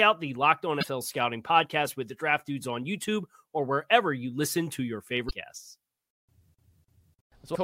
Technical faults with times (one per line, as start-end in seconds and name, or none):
0.80-0.84 damaged data in a compressed stream
5.27-5.31 damaged data in a compressed stream
7.51-7.56 damaged data in a compressed stream